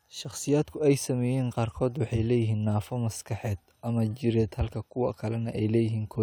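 No audible technical faults anywhere in the speech recording.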